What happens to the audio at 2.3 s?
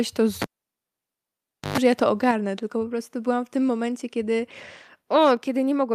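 At 2.31 s, just after "że ja to", the microphone volume is stepped down. The whole signal drops by about 4 dB at once, voice and background together. It stays lower into "tylko po prostu byłam". The likely cause is call software cutting the input gain in a single step.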